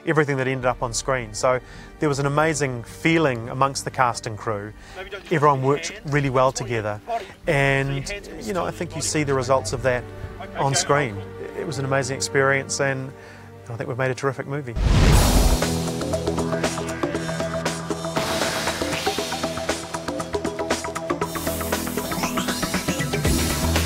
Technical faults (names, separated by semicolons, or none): none